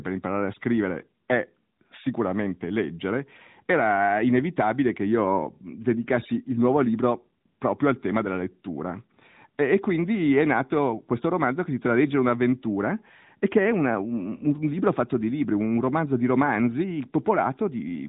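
From start to end, the speech carries AMR narrowband mobile codec damage, plainly audible. Nothing passes above 3.8 kHz. The thin, buzzy, synthetic tone fits a 10.2 kbps AMR-NB mobile call.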